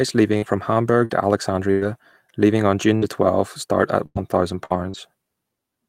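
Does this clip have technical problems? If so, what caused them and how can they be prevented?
Yes. Repeated packet loss (robotic sound) occurs from 0.37 to 1.83 s, before "leaving on", and from 2.97 to 4.96 s, after it. Gaps up to about 100 ms were patched by extending the preceding sound, leaving choppy speech with pieces missing. A steadier network, a larger jitter buffer and forward error correction would prevent it.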